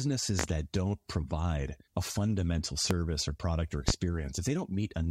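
Loud pops break into the speech at 0.39 to 0.47 s as a quick double pop, then singly at 2.91 and 3.88 s, each peaking roughly 20 dB above the voice. These sharp transients are likely voltage spikes from a plug, switch or static, while the speech continues underneath.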